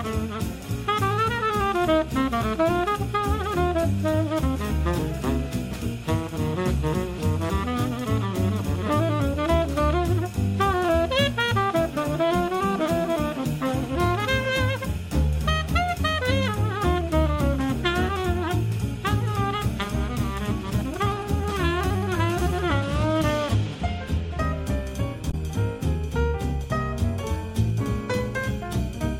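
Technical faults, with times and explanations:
25.30 to 25.34 s, damaged data in a compressed stream: for about 40 ms the decoder meets corrupted bytes, misreads or discards the affected frames, and loses sync until it locks onto the next valid frame header, so a short chirp, squawk, click or hole replaces the audio. Unlike a plain dropout, which leaves clean silence, or a single click from one bad sample, this corrupts a whole frame's worth of sound at once.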